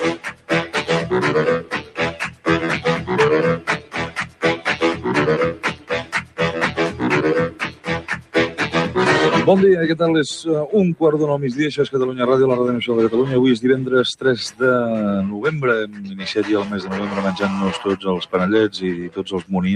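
A speech noise suppressor was left on for the whole clip, an instance of noise suppressor applied to music or sounds. It treats steady content as noise, so the level swings by around 10 dB and the sound pumps, flutters or thins.

The suppressor then produces deeper episodes of sound cut by the noise suppressor, mistaking sustained passages for noise and pulling them down by about 14 dB at 0.15–0.75 s, 1.61–2.47 s, 3.58–4.67 s, 5.54–6.4 s and 7.5–8.6 s. It cuts shallower at 15.32–15.47 s (about 7 dB) and 15.84–16.22 s (about 10 dB), then by about 14 dB again at 18.95–19.53 s. Each time, held sound sinks or its decay is cut short.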